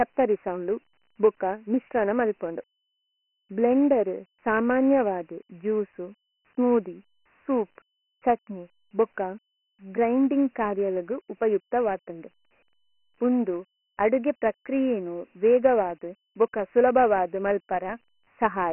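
Throughout the speech, Dialogic VOX ADPCM coding cuts everything above 3 kHz and leaves heavy gritty hiss that tracks the voice. That ceiling, below the 3.4 kHz telephone edge, points to 4-bit ADPCM at 6,000 samples a second, unlike clean μ-law phone audio with its steady, quieter grain.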